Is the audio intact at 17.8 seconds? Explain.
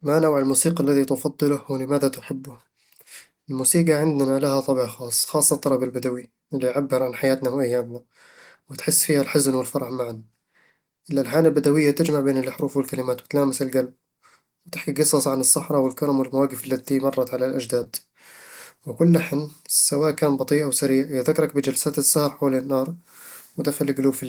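No. Just after "والمواقف اللتي مرّت على", from 17.83 to 17.87 s, there is a short concealed packet loss. Roughly 20 ms of audio never arrived in time. The decoder papered over it by extending the preceding sound for about 16 ms and then blending back in. The result is a brief smear or wobble. A plain dropout would instead leave a hard silent gap or click.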